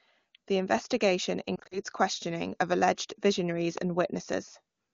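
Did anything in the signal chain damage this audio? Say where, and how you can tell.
Yes. From about 1.55 to 1.81 s, just before "questioning of", the speech briefly warbles and smears in several short dips. These are lost AMR speech frames, damage in the network or radio stage. About 100 ms of audio is missing, scattered over 160 ms in gaps no longer than 40 ms, which fits roughly five 20 ms frames failing their checks. For each missing frame, the AMR-WB decoder replays the last good pitch and vocal tract settings at a falling level.

A loud pop lands at 3.78 to 3.80 s. It is a single sharp transient that peaks about 15 dB above the speech, while the speech carries on underneath. A pulse this short and hard is not something a codec produces. It is likely a voltage step added in the analogue wiring or by a driver glitch, such as a plug, switch or static discharge, which the following circuitry then shaped into an audible click.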